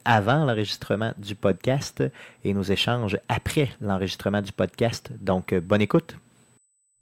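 A faint, steady high whine sits under this speech recording from start to finish. It holds a fixed pitch at 8 kHz, with no drift. That is USB whine. The USB bus draws current in 125-microsecond microframes. This ripple gets into the audio through the power or ground. The result is a constant tone at 8 kHz. It sits well below the speech, around 45 dB down.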